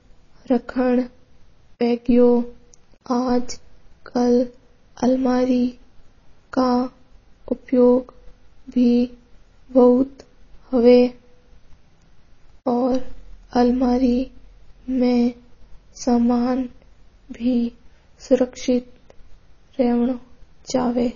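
Throughout the speech, the audio shows plainly audible damage from likely MP3 compression. Nothing is heard above 7.1 kHz. The treble is simply cut off there. The sound is watery and swirly. Faint parts flicker in and out. Sibilants turn metallic and chirpy. The encoder seems starved of bits, which fits a very low rate near 24 kbps. It drops weak frequency content from frame to frame.

From 1.77 to 1.81 s comes a pre-echo lasting about 39 ms. A short hiss arrives just before a sharp attack. The codec spread its noise across the whole block. The noise sized for the loud onset also filled the quiet moment ahead of it. The attack itself sounds soft and smeared rather than crisp.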